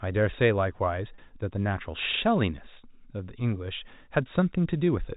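Packet loss with pitch repetition at 1.15 s: about 30 ms of audio went missing, and the receiver repeated the last pitch period, giving a briefly held, buzzy tone.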